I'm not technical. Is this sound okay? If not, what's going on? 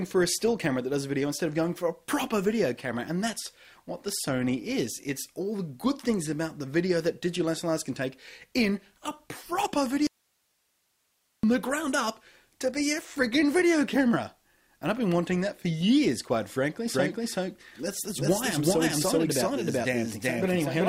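No. At 10.07 seconds the wanted signal was likely lost somewhere along the way while the rest of the chain kept running. That is an audio dropout to a faint residue: the sound cuts out abruptly, leaving only quiet hiss for about 1.4 seconds, until it returns at 11.43 seconds.

From 16.88 seconds to the end, the same audio is mixed in twice, likely because it was captured a second time by a slower route or an edit left two copies out of step. This doubled audio track adds a second copy, about as loud as the first, trailing roughly 0.4 seconds behind. It starts abruptly and sounds like a clean repeat, not a room echo.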